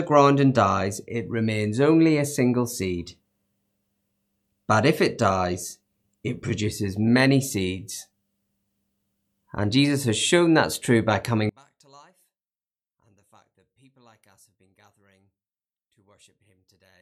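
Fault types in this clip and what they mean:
One channel inverted: from 11.49 s, after "shown that's true by", the speech drops about 35 dB in mono, likely because one side's polarity got flipped and cancelled the centre.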